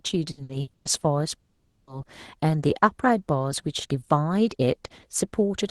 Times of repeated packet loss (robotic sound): 0.31-0.88

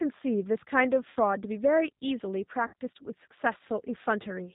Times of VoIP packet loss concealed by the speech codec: 1.10-1.17, 2.67-2.73, 4.23-4.28

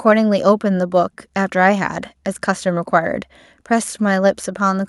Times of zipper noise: none

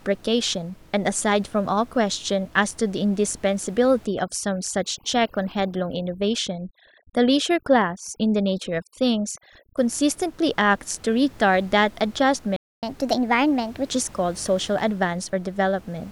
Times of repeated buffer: none

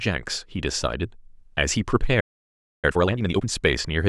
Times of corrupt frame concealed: none

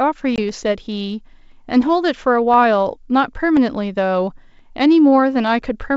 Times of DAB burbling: none

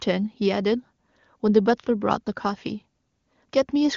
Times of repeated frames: none

